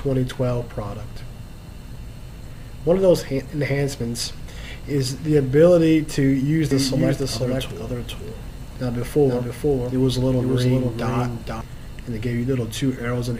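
From 6.71 to 11.61 s there's a doubled audio track: a dry copy trails about half a second behind, roughly 5 dB down, likely a slower second capture or misaligned edit.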